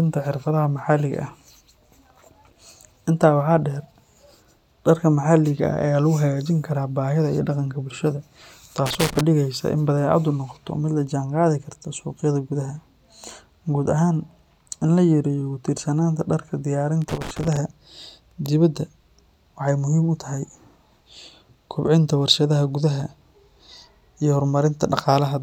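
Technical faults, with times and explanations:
8.86–9.21 s and 17.02–17.57 s, loose connector crackle: irregular bursts of scratching crackle lasting about a third and about half a second, as a worn contact in the speech path rapidly breaks and remakes. Unlike evenly spaced digital clicks, these are ragged and uneven.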